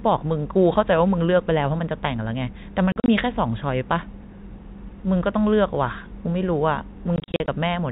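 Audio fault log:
2.92 to 3.08 s and 7.16 to 7.48 s: packet loss filled with silence. The speech breaks into short gaps with no sound in them. About 100 ms goes missing over 160 ms, then 160 ms over 320 ms. No gap exceeds 40 ms, which suggests 20 ms packets. Each gap has hard edges.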